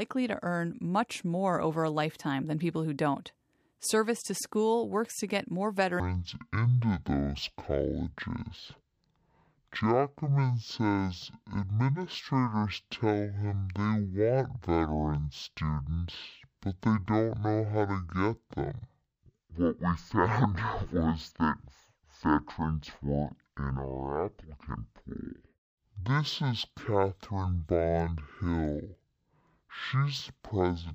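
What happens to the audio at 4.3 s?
Nothing goes wrong at 4.3 s; the speech carries straight through that moment with no dropout, click, distortion or other fault.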